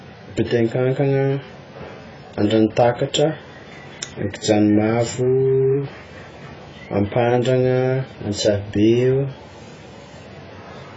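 From start to finish the speech sounds dull and smeared, with nothing above 7.6 kHz and a warbling, fizzy texture on sustained sounds and sibilants. The likely cause is heavy AAC compression, with damage that fits AAC-LC at around 16 kbps. At a rate that low the encoder drops the upper band outright and quantises the remaining frequency lines so coarsely that gaps open in the spectrum and frame-to-frame changes turn into that watery shimmer.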